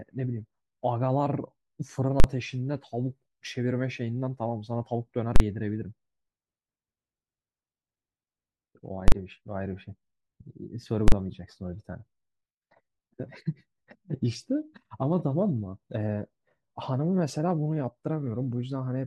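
A calculation in the processing chain produced infinite or invalid numbers, and these were clamped to the largest value the format can hold, so this speech clip contains invalid numbers at full scale. Each affected block is pinned flat at one extreme value, far beyond the speech peaks, for 40 ms, short enough that it comes across as a single hard bang rather than two separate pops, at 2.2, 5.36, 9.08 and 11.08 s.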